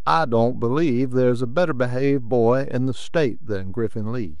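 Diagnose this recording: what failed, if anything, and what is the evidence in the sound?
The failure is a DC offset, present for the whole length of the speech. The entire waveform sits displaced from zero by a constant of about -26 dBFS. The stage is likely the analogue front end or converter, where a bias error likely added a fixed voltage. There is no tone to hear. The evidence is that steady, unmoving energy right at 0 Hz, and the lost headroom on one side. Hum or rumble differs: it has pitch above zero.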